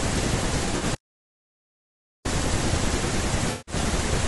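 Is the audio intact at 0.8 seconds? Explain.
No. At 0.8 s the sound sits inside a stretch of AAC frame loss with concealment, running from 0.65 to 0.83 s. About 80 ms of audio is missing, scattered over roughly 160 ms, with the longest gap around 40 ms. The decoder patches each hole by reusing the last good spectrum with scrambled or interpolated detail, so this moment comes out as a smeared, noisy, phasey blur rather than clean speech.

The same moment also carries the roughness that runs through the whole clip, the sound of low-delay AAC compression, likely AAC-ELD at a bitrate around 32 kbps. Its short frames resolve the pitch harmonics poorly, so the speech is plainly grainy, with noise filling the gaps between harmonics and a thin, synthetic-sounding top band.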